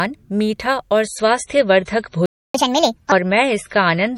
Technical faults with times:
1.04-4.17 adaptive stream at a lower bitrate
2.26-2.54 playback stall
2.54-3.12 catch-up at higher speed

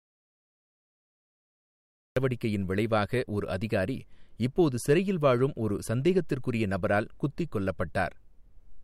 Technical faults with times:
0.00-2.16 audio dropout to silence

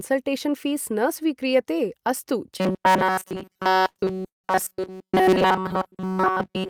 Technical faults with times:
2.58-6.70 robotic sound from repeated short buffers
3.35-4.46 repeated stalls (stutter)

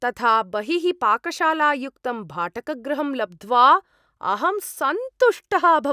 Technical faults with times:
none

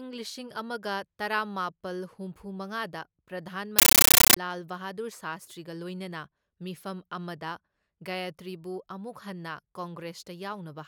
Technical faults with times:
3.79-4.37 compressed stream played as audio

